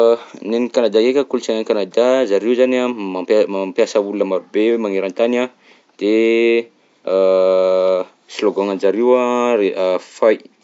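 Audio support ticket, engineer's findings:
No faults found. Room noise well below speech level.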